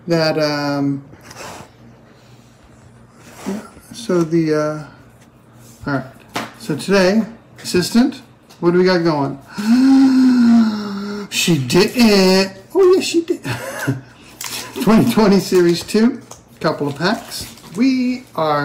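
Hard clipping runs through the whole recording: the signal is driven about 10 dB past what one stage can pass, so around 3 percent of samples hit the ceiling and are cut flat. Unlike the rounded warmth of soft saturation, those abrupt flat tops spray bright high harmonics, heard as harsh crackle on every peak.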